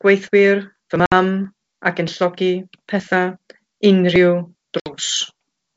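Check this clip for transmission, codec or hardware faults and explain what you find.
Two dropouts from packet loss on an ADPCM call, at 1.06 to 1.12 s and 4.80 to 4.94 s. Each loses about 60 ms, a few packets, replaced by silence. The receiving decoder's adaptive predictor and step size then drift from the sender's, so speech resumes slightly distorted before settling. A spectrogram shows sharp-edged blank columns, and the waveform shows abrupt flat gaps. The wideband G.722 path, which sounds like the full 64 kbit/s mode, carries speech up to about 7 kHz.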